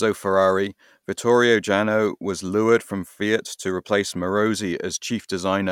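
Nothing in the speech stood out as a technical fault on listening.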